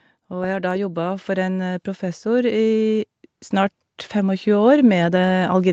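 Speech where automatic gain rising lifts the level by about 10 dB from 0.29 s to 5.62 s; background noise swells with the voice, unlike a talker moving closer.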